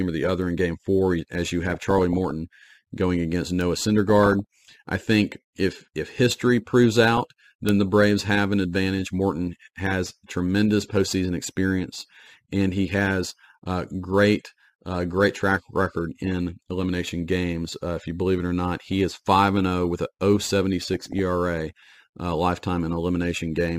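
Speech with two kinds of digital damage. Bit error spikes at 0.42, 3.61 and 7.69 s are single-sample ticks, sharp and broadband, unlike burbling's longer, band-limited blips. DAB burbling at 1.71–2.31, 4.10–4.74, 7.13–7.19, 16.19–16.32 and 20.87–21.19 s comes from weak reception. A fraction of a percent of bit errors slip past error correction, so individual sub-bands blip and jump in level frame by frame.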